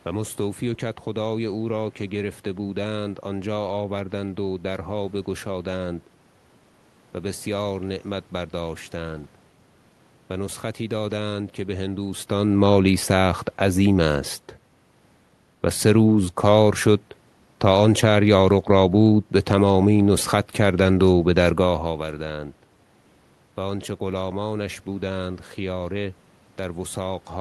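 Nothing stood out as a technical problem on listening to this speech recording.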